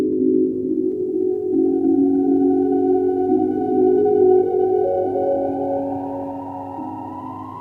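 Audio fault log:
throughout, doubled audio track: the music repeats as one clean full-band copy around 300 ms behind, a few dB quieter, likely a second capture path. Unlike echo, there's no decay or room colour.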